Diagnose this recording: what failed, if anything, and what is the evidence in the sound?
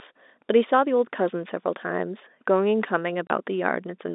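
A network fault: packet loss filled with silence. At 3.27 s the speech drops into a hard 30 ms hole, which points to a single lost packet. Unlike a driver or buffer underrun, the gap is clean digital silence sized to one packet, not a repeated or smeared fragment, with the narrow G.711 telephone band continuing on either side.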